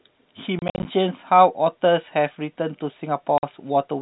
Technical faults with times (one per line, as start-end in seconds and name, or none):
0.59-0.85 packet loss filled with silence
3.38-3.43 packet loss filled with silence